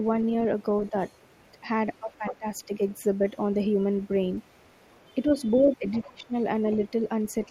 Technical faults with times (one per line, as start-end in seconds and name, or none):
0.81-2.94 other side's voice leaking through
2.05-2.46 speech suppressed in double talk
4.01-6.13 other side's voice leaking through
5.64-6.33 speech suppressed in double talk
6.72-7.49 other side's voice leaking through